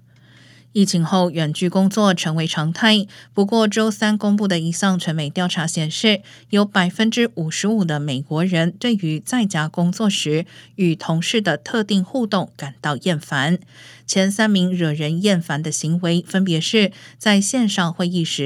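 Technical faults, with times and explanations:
No technical faults can be heard in the speech.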